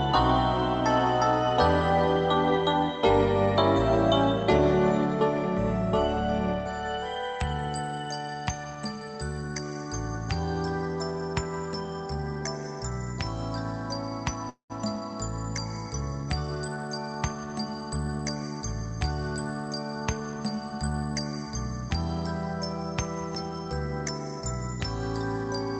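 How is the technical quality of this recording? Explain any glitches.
Two glitches stand out, a short stall and a brief rush, on audio that has passed through a call codec and tops out at around 8 kHz.

Call audio freeze, 14.49 to 14.72 s: the sound stalls for about 0.2 s. The receiver stretches the last sound into a fading buzz, and about 120 ms of that is silence. Playback then resumes exactly where it stopped, so nothing is lost, but everything after runs about 204 ms later. The likely cause is packets held up in transit that drained the jitter buffer.

Jitter buffer speed-up, 16.55 to 17.97 s: having built up that extra delay, the buffer works it off by repeatedly dropping slivers a pitch period or so long, roughly 0.2 s in total. The passage plays at about 113% speed with unchanged pitch, so it sounds briefly hurried before settling back to normal pace.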